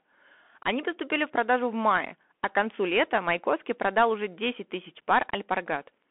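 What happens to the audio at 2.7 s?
The Bluetooth CVSD headset codec is active at 2.7 s, as it is throughout the speech. Each sample is coded as a single up-or-down step whose size adapts, with a coarseness that fits a 64 kbps one-bit stream. The band is confined to roughly 250 Hz to 3.4 kHz, so the sound is thin and boxy. Fast, loud high-frequency energy outruns the step size and distorts, s sounds turn scratchy, and a granular hiss sits underneath.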